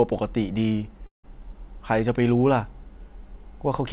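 At 1.06 s the speech smears into a fading buzz, goes silent, then resumes at 1.25 s minus a chunk, likely a long network dropout.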